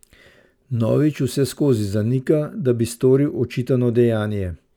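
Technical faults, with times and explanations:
0.00 to 2.15 s, crude rate conversion: the speech carries a gritty, inharmonic fizz that rides on louder and brighter sounds, then clears. The sample rate was raised without a proper filter, with each output sample copied from the nearest input sample, so some samples are repeated in a regular pattern. The pattern fits a 44.1 kHz to 48 kHz conversion. The timing error adds tones unrelated to the speech, roughly 30 dB below it.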